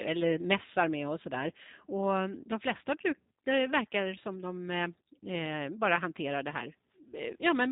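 From start to finish, the speech carries plainly audible G.729 codec damage. Nothing above 3.8 kHz survives, and the rebuilt voice sounds rough and synthetic, which fits an 8 kbit/s stream.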